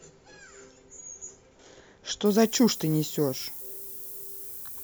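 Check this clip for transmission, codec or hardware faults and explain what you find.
One fault is present in the speech, starting at 2.26 s and running to the end. From that point a steady, thin hiss sits under the sound, bright and concentrated toward the top of the band, and it stays close in level to the signal, roughly 10 dB below it. This is low bit depth with noise shaping: the audio is quantised very coarsely, which points to about 6 bits, and the rounding error is fed back so that its energy is pushed up into the highest frequencies.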